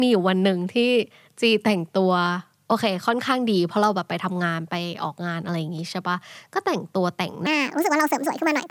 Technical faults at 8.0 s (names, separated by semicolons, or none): wrong sample rate